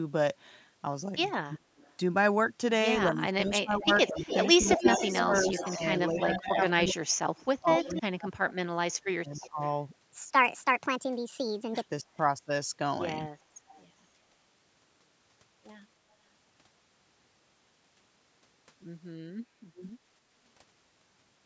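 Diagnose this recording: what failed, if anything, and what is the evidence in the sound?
The call's echo canceller likely mistook both sides talking for echo and ducked the speech: suppressed in double talk at 1.42–1.67, 3.09–9.6, 12.03–12.08 and 19.2–19.85 s, dropping up to about 40 dB.

An echo leak, likely from a speakerphone's canceller letting residue through, puts delayed copies 222–318 ms behind the speech at 1.77–1.95, 3.8–8.02, 9.34–9.68 and 13.69–13.83 s. The loudest copy is about 5 dB below the speech.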